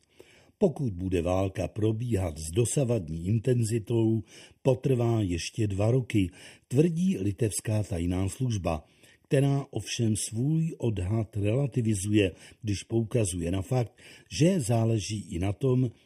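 Channel delay causes comb filtering across the whole speech clip. One channel arrives late by well under a millisecond, roughly 0.4 milliseconds. When the two channels are summed to mono, the shared signal cancels at evenly spaced frequencies. The first notch falls around 1.5 kHz, with further notches repeating higher up. The speech sounds hollow and phasey. The colouration stays fixed from start to finish.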